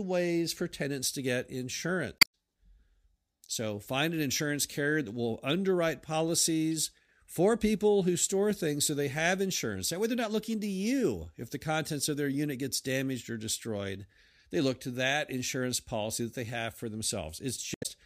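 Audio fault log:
2.18–2.34 s, damaged data in a compressed stream: a brief chirp, squawk, click or short hole breaks into the speech as the decoder misreads corrupted frames and hunts for the next header.
17.74–17.86 s, damaged data in a compressed stream: a short chirp, squawk, click or hole near the end, again from corrupted frames throwing the decoder out of sync.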